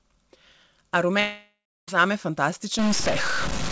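Long network dropout from 1.20 s to 1.90 s in this speech recording: the sound abruptly freezes into a smeared, fading buzz that carries on for about 0.68 s before the audio resumes, with roughly 0.29 s of that stretch sunk to near silence. The likely cause is a burst of lost packets on the call link. The receiver filled the gap by extending the last sound it had, then let that fade out, and the missing audio never returns. Stuck bit from 2.79 s to the end of the clip: the audio picks up distortion, with a noise that also fills the pauses between sounds. This points to a single data bit likely held at a fixed value by a faulty line or converter, shifting many samples by that bit's weight in a pattern that follows the waveform. The call-path band limit is audible as nothing above 8 kHz, which fits a G.722 wideband codec.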